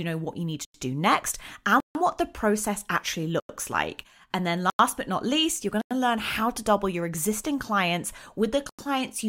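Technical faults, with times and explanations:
0.65 s, 3.40 s (after "what the process actually"), 4.70 s (before "but not least you're"), 5.81 s, 8.69 s: block of digital silence, each 93 ms, which fits an unfilled 4096-sample buffer. The sound drops abruptly to silence and returns.
1.80–1.95 s, between "do next" and "what the process actually": block of digital silence, 148 ms long, heard as a hole, likely where the output buffer went unfilled.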